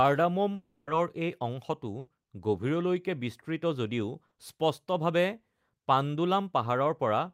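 A speech recording with three gaps covered over by the receiver. From 0.55 to 0.90 s the sound turns into a buzz or hiss that fades for about 320 ms before speech returns further on, likely a long network dropout. On a spectrogram this shows as a smeared, repeated sound losing energy, with no true silence. At 1.99 to 2.10 s a burst of packet loss leaves about 80 ms missing, filled by continuing the last sound and fading it down. The waveform shows a decaying, too-regular stretch, and the spectrogram shows stretched bands where speech detail should change. At 4.27 to 4.34 s a short concealed packet loss covers about 40 ms with a brief smear that blends back into the real audio. It appears as a narrow blurred strip on the spectrogram and a slightly over-smooth patch in the waveform.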